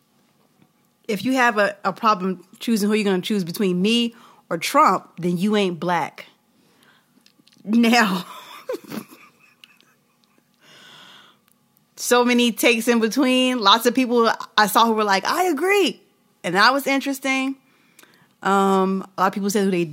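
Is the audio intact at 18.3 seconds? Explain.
Yes, the audio is intact at 18.3 seconds, with no fault to be heard at that moment.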